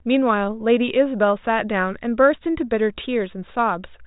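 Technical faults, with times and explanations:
Nothing goes wrong in this speech recording; it simply has the narrow telephone sound of G.726 ADPCM at 40 kbit/s, with no content above about 3.8 kHz and at most a faint trace of coding grain.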